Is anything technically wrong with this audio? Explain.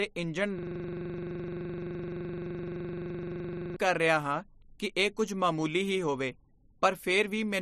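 Yes. From 0.59 to 3.76 s there is a system hang loop: the driver stalled while the audio hardware kept replaying one 42.67 ms buffer, which fits a 2048-sample ring buffer, 74 times. It sounds like a rapid, rough 23.4 Hz stutter until the speech resumes at "ਕਰ ਰਿਹਾ ਹਾਂ ਕਿ".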